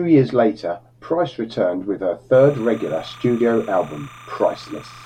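From 2.34 s to the end, linear timecode from a neighbouring track or cable leaks into the speech path. That is timecode bleed. The code is a square wave that flips between two pitches, near 1 kHz and 2 kHz, with a rhythm that fits 30-frame timecode. It sits roughly 25 dB below the speech, so a steady, chattering warble runs behind the voice for the rest of the clip.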